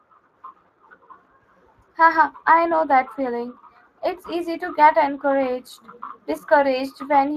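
From start to finish the speech has a coarse, hoarse, noisy grain, plainly audible on every stretch, and nothing reaches above 15 kHz. This is Speex codec damage. Speex is a CELP coder: it models the voice as a filter driven by a coded excitation signal, and with limited bits that excitation is approximated roughly, which leaves the rasp. The degree of roughness fits a mid-range setting of around 22 kbps.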